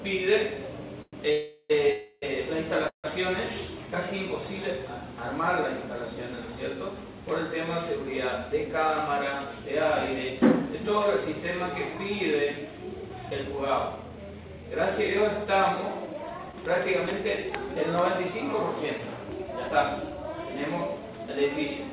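Four call audio freezes come early, at 1.02 to 1.28 s, 1.32 to 1.72 s, 1.92 to 2.24 s and 2.88 to 3.06 s. Each time the sound stalls. The last fragment is stretched into a fading buzz, then drops to near silence. The likely cause is late packets emptying the jitter buffer. When they arrive, the audio resumes where it stopped. Little is lost. About 0.9 s of delay builds up across the four stalls.

From 8.49 s to the end, a jitter buffer speed-up runs. The buffer is holding more than its target, so the receiver trims tiny pitch-period slices, again and again. About 0.7 s is removed in total. Playback runs at roughly 106 percent speed. The pitch does not change. The sound simply feels slightly hurried and rushed.

Between 16.52 and 19.72 s, scattered short gaps appear. About four isolated packets go missing, 80 ms in all. The receiver patches each hole by extending the preceding sound. The longest patch lasts only around 15 ms. 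The result is a few brief ticks and tiny smears. The rest of that stretch stays clear. All of this passes through a G.711 mu-law call path, with nothing above 4 kHz.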